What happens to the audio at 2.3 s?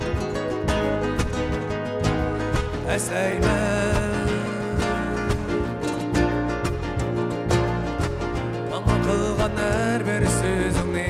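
Nothing goes wrong at 2.3 s; the audio carries on intact through that moment with no dropout, click or other audible fault.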